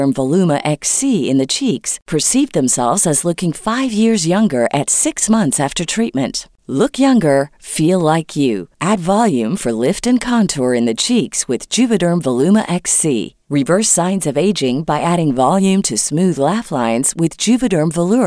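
Speech in the recording carries no audible technical fault anywhere, and the signal stays steady and continuous throughout.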